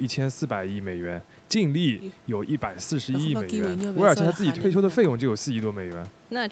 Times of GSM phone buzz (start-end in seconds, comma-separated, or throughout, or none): none